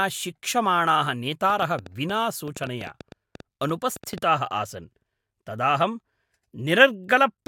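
From 1.5 s to about 4.24 s there's a train of clicks riding over the speech: around 8 per second, but unevenly spaced, so it reads as a ragged ticking rather than a steady pulse. That's roughly twenty clicks, all much the same sharp shape and poking a few dB above the speech itself, so they're clear even in the gaps. It's likely interference from nearby equipment or a faulty connection or power supply.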